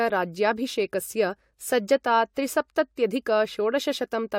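No technical faults can be heard anywhere in the recorded speech. There is no moment that needs a timestamp or an account of something going wrong.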